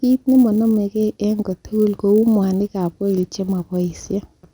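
Right through the speech there's a buzz at 100 Hz, present only while there's signal. That's a resampler restarted on every block: each 10 ms block was converted alone, likely a 24 kHz to 48 kHz step, so every edge picks up a small error.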